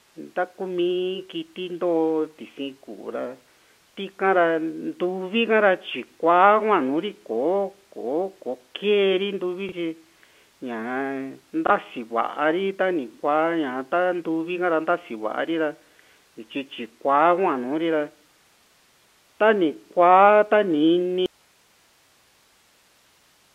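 Telephone-band speech, narrowed by G.711 A-law coding, blips with a brief repeated fragment at 9.69–9.72 s and again at 11.67–11.70 s: packet loss with last packet repeated, each a single 30 ms packet replayed. From 21.26 s to the end the speech cuts off abruptly, leaving only hiss around 40 dB below its level, likely an audio dropout to a faint residue on a still-live line.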